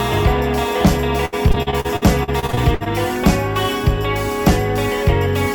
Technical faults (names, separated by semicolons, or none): repeated packet loss (robotic sound)